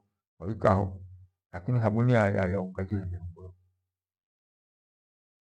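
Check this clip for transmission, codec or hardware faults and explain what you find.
There are two blocks of digital silence in this speech, at 1.53 s just before "lakini thabuni" (about 1 ms) and at 2.90 s just before "fyombo yo" (about 6 ms). Samples drop abruptly to zero, as when an output buffer goes unfilled, giving a tick and a slightly longer tick or dip. The hard edges and absence of any fade or smeared fill distinguish them from concealed packet loss.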